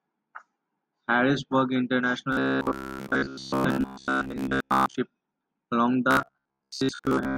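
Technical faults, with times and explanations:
2.33–4.95 s and 6.11–7.37 s, robotic sound from repeated short buffers: the speech turns into a stiff, metallic buzz at a fixed 66.7 Hz that still roughly follows the shape of the words. That pitch corresponds to a stretch of about 15 ms being looped, so most of the real audio in these spans is dropped and replaced by copies. The likely cause is audio arriving too slowly, with playback filling each gap by repeating its last short buffer.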